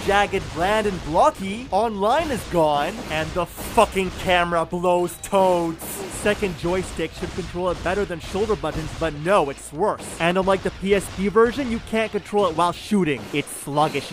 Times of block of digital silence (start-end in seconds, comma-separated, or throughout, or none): 8.84, 10.31